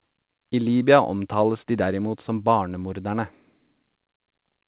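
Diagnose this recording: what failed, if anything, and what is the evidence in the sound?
Nothing failed; the call path carries this speech normally.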